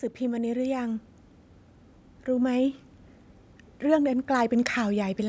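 A speech recording with automatic gain rising: from 0.18 to 1.11 s the level climbs by about 5 dB as the gain control decides the input is too quiet and turns itself up, so voice and room noise swell together, with the call-style microphone chain's band limit topping out around 8 kHz.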